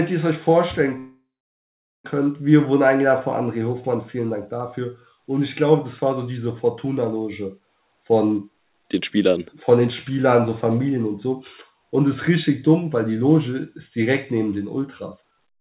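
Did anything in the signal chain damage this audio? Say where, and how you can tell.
Yes. From 0.98 to 2.06 s the sound stalls: the last bit of audio is stretched into a fading buzz that drops to silence for about 0.8 s. It then resumes exactly where it stopped, with nothing skipped. That points to a call audio freeze at the network and jitter-buffer stage, likely caused by delayed packets draining the buffer. Unlike a dropout, the roughly 1.06 s of filled time is inserted rather than replacing audio, so everything after it runs that much later.

The jitter buffer speed-up appears twice, at the buffer stage. From 8.84 to 10.47 s the audio runs at about 105% speed, trimming roughly a tenth of a second. From 15.18 s to the end it hurries to about 146%, cutting about a fifth of a second. Pitch stays put throughout, which separates this from a resampling or clock error. The buffer is dropping whole pitch periods to shed excess delay. 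The narrowband sound, with nothing above 4 kHz, is just the telephone codec on the call path.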